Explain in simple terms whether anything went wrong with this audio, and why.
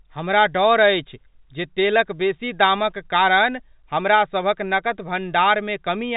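Nothing went wrong with the signal: the speech has simply been carried in the ordinary G.711 telephone format, which keeps only sound below 4 kHz and so gives it the familiar narrow quality of a phone call, and no faults can be heard.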